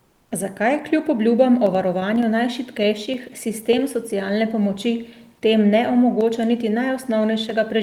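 Comfort noise in place of the background, 0.07 to 0.31 s in this speech clip: the real background is replaced for 240 ms by steady, featureless noise about 2 dB quieter, likely from Opus discontinuous transmission.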